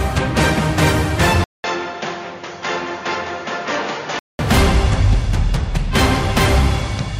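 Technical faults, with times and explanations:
1.44 to 4.39 s, input switched to a poorer device: The sound drops out for about 200 ms, then returns dull and boxy. Nothing is left above 7 kHz. The level falls by roughly 10 dB. A new background noise appears, faint, around 35 dB below the signal. At 4.39 s the full band and level come back. This is likely a mid-recording switch to a narrower-band input, with its own tone and noise floor.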